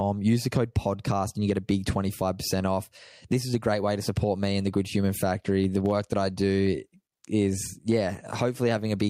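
A speech recording with gain pumping running through the whole clip, with the level swinging by around 10 dB. Loud and quiet passages sit unnaturally close together, giving a squashed, breathing quality. The likely cause is input gain set far too hot, with a fast limiter or compressor clamping each peak.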